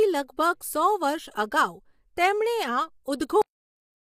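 Across the whole clip the speech sounds rough and grainy, with noise between harmonics, likely from low-delay AAC compression such as AAC-ELD at a rate fitting about 32 kbps. At 3.42 s a cut-off end stops the audio mid-sound: the final buffers never played, leaving abrupt digital silence with no decay.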